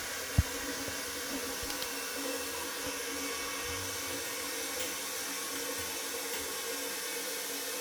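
Listening through the recording of everyday sounds, nothing stood out as a technical problem at any point.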